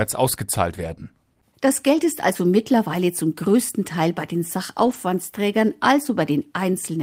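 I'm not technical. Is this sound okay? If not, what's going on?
No. Twice, at 0.77 to 0.91 s and 4.85 to 4.95 s, the speech turns briefly rough and grainy. This is a lost packet rebuilt from error correction: a few chunks of the call went missing, and the chunks after them carried cruder backup copies, which were played instead (about 80 ms, then 60 ms). Unlike an ordinary dropout, there's no silence or stutter, just a short patch of lower quality.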